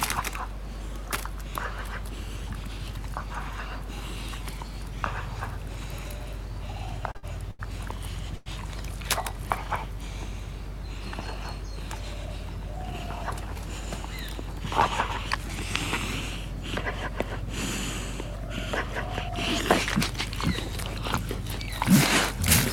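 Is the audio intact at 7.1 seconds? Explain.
No. A short stall from a late packet hits at 7.11–7.17 s and again at 7.17–7.25 s: the jitter buffer ran dry, so the last sound was stretched about 35 ms, then 60 ms, until the packet arrived. Nothing is lost, but the sound hangs with a faint buzz or dip.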